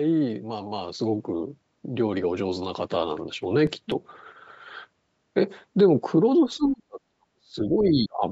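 CD scratch ticks, 3.43 to 4.04 s: six brief ticks, the longest about 2 ms, one per disc turn, where damaged data beyond error correction was interpolated or muted.

Speech suppressed in double talk, 6.45 to 8.23 s: the voice drops by up to about 40 dB in pieces totalling roughly 1.5 s, likely an echo canceller attenuating overlapping speech.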